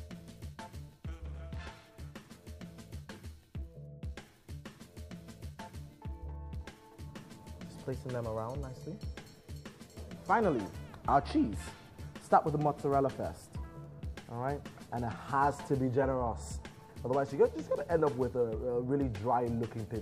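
At 16.02 s compressed frames are skipped: a short stretch of coded audio never reaches the output, so the sound jumps ahead by roughly 20 ms.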